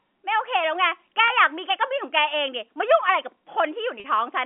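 Packet loss with pitch repetition occurs twice: 1.28 to 1.30 s (20 ms, fitting one lost packet) and 4.00 to 4.04 s (40 ms, about two). The receiver repeats the last pitch period to fill each gap, giving a briefly held, buzzy sound through the narrowband telephone line.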